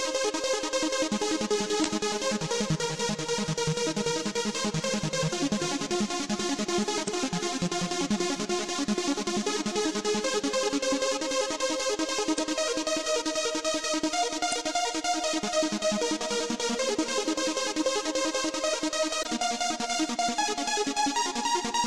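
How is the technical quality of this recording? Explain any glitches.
The recording has five short glitches from damaged data in a compressed stream. Each lasts about 40 ms: 1.82–1.86 s, 7.04–7.09 s, 12.35–12.39 s, 14.49–14.53 s and 19.22–19.26 s. At each point the decoder met corrupted frame data, misread or rejected it, and had to find sync again at a later frame header. The result is a brief break in the sound. On a spectrogram each shows as a narrow vertical band disrupting the surrounding pattern, and on a waveform as a short discontinuity in the signal.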